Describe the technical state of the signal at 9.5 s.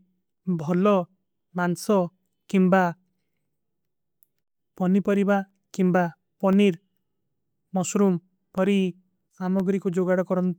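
At 9.5 s the speech sits just before the last of a series of evenly spaced ticks. That final tick lands at about 9.6 s, ending a run that began at 0.38 s and recurred every 1.024 s, about ten in all. These are periodic USB or driver dropouts. A background task stalls the audio path at a fixed interval, and roughly half a millisecond of signal is replaced by silence each time, so the cut clicks against the speech.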